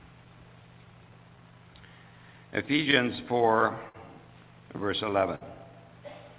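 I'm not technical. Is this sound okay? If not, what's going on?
No. Clock drift between sender and receiver runs through the whole clip. The sending device's internal clock ticks about 4% slower than the receiving one, so sound arrives a little too slowly to keep up. The receiver's waiting area for incoming sound, called a jitter buffer, keeps running low, and the receiver has to keep patching the gaps. The repeated timing corrections come from that mismatch.

Repeated timing corrections happen from 0.13 to 3.57 s. To cover the shortfall, the receiver keeps stretching or repeating tiny slices of sound, playing that stretch at about 97% speed and adding roughly a tenth of a second overall. Each patch is small and unevenly spaced, so you may hear it only as faint hiccups or a slightly dragging, uneven pace.

A short stall from a late packet occurs twice, at 3.89 to 3.96 s and at 5.35 to 5.43 s. 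Each time, a small chunk of sound arrived late and the waiting area ran empty. The receiver held the last sound for about 55 ms until the chunk showed up, then carried on from the same place. Nothing is lost, but a sound lingers a moment too long, with a slight buzz or dip. The whole clip also has a muffled, phone-like tone with nothing above 4 kHz, which is normal for this kind of call line.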